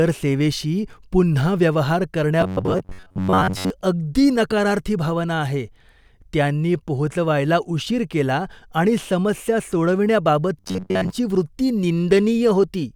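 Audio likely arrived too seldom to keep the output fed, so the playback side filled the gaps by replaying its most recent short buffer over and over, skipping most of the real speech. Each repeat lasts about 10.7 ms, which sets a fixed buzz at about 94 Hz. The result is robotic sound from repeated short buffers, from 2.41 to 3.70 s and again from 10.60 to 11.10 s. The voice becomes a rigid, metallic drone that only loosely tracks the speech.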